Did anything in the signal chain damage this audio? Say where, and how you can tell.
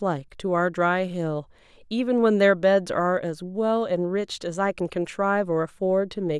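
No, nothing in the signal chain audibly damaged this speech recording, and its level, continuity and timing hold steady at every stage a listener can assess.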